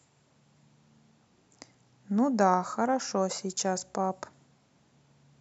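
Nothing goes wrong anywhere in this bit of speech, so there's no fault to point to at any moment.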